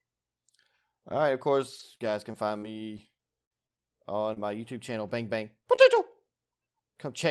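Speech that came through a call path whose spectrum tops out near 12 kHz, which fits a super-wideband Opus stream at a moderate bitrate, shows scattered short gaps from 1.79 to 5.98 s, starting just after "right of". About ten brief holes, the longest around 50 ms, were concealed by extending the preceding sound, producing ticks and small smears. On a spectrogram these appear as short stretches of smeared, repeated harmonics; the waveform shows copied cycles at each patch.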